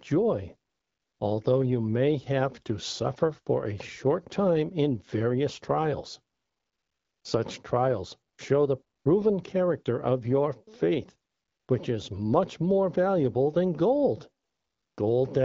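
AMR comfort noise fills pauses at 0.69–1.19, 6.35–7.23, 8.33–8.37, 8.97–9.05, 11.31–11.67 and 14.43–14.97 s. Speech frames stop and a smooth synthetic hiss replaces the real background, switching in and out.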